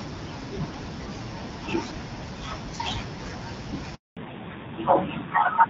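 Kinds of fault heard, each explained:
Handover gap: At about 3.95 s the sound dies away within a few tens of milliseconds and stays silent for 220 ms, until about 4.17 s. The call is being passed from one network to another, and no speech frames arrive during the switch, so that stretch is lost. Packet-loss dropouts tend to leave smeared or repeated fragments. This is one clean hole, and the sound that returns has a different character.
Fallback to narrowband: From about 4.17 s to the end, the call runs on an older narrowband codec instead of HD Voice. Nothing above 4 kHz survives, and the sound turns duller and rougher. Before the gap, the wideband codec carries the upper band with only light coding damage. A muffled microphone or simple low-pass filter would lack this timing: the top end vanishes exactly at the handover, together with added roughness typical of a low narrowband rate.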